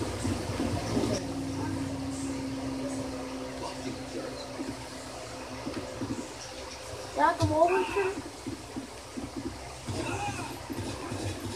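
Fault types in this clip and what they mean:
one channel drops out: from 1.18 s to the end the sound falls abruptly by about 6 dB and stays down, likely one stereo channel going silent before the mono sum. Unlike a gradual fade or gain ride, the step is instant and holds steady.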